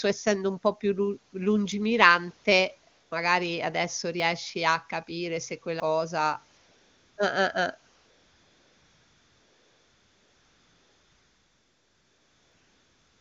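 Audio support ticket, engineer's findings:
Jumps in the speech at 1.72 s (after "un po' più lu"), 4.2 s (before "a capire se"), 5.8 s (after "a capire se") and 12.52 s. Likely dropped buffer (overrun): roughly 40 ms skipped each time, about a tenth of a second at 5.8 s.

Background replaced by smooth, steady hiss switching in and out at 2.91–3.11 s, 6.57–7.17 s and 7.95 s to end. AMR comfort noise: no speech frames sent, receiver synthesising noise in place of the real background.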